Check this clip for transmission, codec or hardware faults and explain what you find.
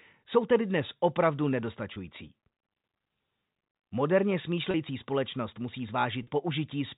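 Three short dropouts in the speech were concealed by packet loss with pitch repetition, under G.711 telephone coding that caps the band at 4 kHz. At 1.94 to 1.96 s, just after "jsou tedy dnes opravdu", about 20 ms of audio is missing. About 30 ms is missing at 4.71 to 4.74 s, just before "společnost musí", and about 40 ms at 6.23 to 6.27 s, just after "společnost musí". In each gap the receiver loops the last pitch period, so the voice briefly holds on a slightly buzzy, frozen tone before normal speech resumes. The lengths fit 10 ms packets dropped in runs of two, three and four.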